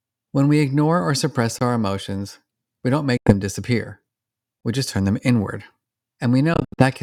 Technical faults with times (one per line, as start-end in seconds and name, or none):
1.59-1.61 gap between chunks
3.17-3.33 Bluetooth dropout
4.61-4.63 gap between chunks
6.54-6.83 Bluetooth dropout